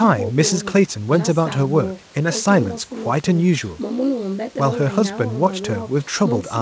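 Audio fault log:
Nothing stood out on listening to the speech, which carries the expected top end of about 8 kHz from its G.722 call path.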